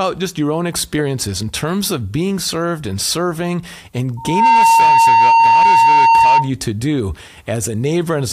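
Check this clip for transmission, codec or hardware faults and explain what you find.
There's one fault here: loudspeaker feedback squeal from 4.17 to 6.50 s. The mic is catching its own loudspeaker, and at 916 Hz the loop gain tops one, so that tone swells in about a third of a second and sits roughly 10 dB above the speech.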